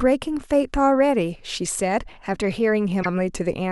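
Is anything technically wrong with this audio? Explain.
Yes. Damaged data in a compressed stream, from 2.99 to 3.06 s: corrupted bytes make the decoder misread those frames and lose sync until it finds the next valid frame header. In the speech this comes out as a brief glitch lasting about 70 ms.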